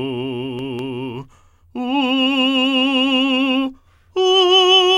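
Nothing here trips up the ear: the music runs along without any dropout, glitch or distortion to point at.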